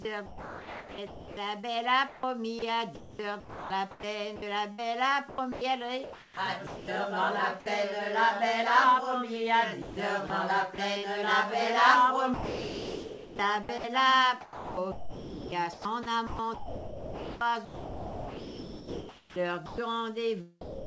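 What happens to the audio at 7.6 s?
From 7.60 to 7.66 s the sound briefly gives way to a patch of steady, featureless noise, about 40 ms of the sound itself going missing. The likely cause is sound dropped by the voice detector: the sender judged that stretch to be background and stopped transmitting, and the receiver filled the 60 ms gap with comfort noise.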